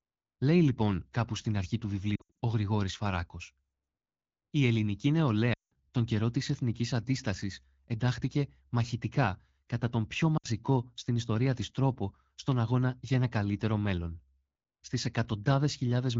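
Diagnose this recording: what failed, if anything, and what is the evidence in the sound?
Radio errors on the link corrupted AMR-WB speech frames, so the decoder, which is otherwise at a clear 12.65 kbit/s, repeated its last pitch and vocal tract settings at falling gain. The sound smears and dips at 2.16–2.40 s after "κάπου στην αρχή του", at 5.53–5.80 s, and briefly at 10.37–10.47 s.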